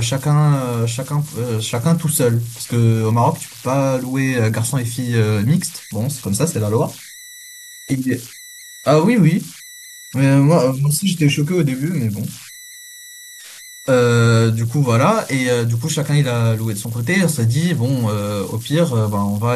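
An undithered delta-sigma converter is cycling through fixed bit patterns on quiet input, producing converter idle tones: a whistle near 2 kHz, about 21 dB below the speech, throughout.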